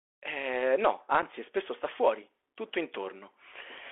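The whole clip runs through a Bluetooth CVSD headset codec, so the speech is squeezed into a phone band of roughly 250 Hz to 3.4 kHz, with scratchy s sounds and a grainy hiss underneath. At 1.22 s there's an unconcealed Bluetooth headset packet loss: about 7.5 ms of audio, likely a single dropped packet, is simply missing, leaving a tiny abrupt gap.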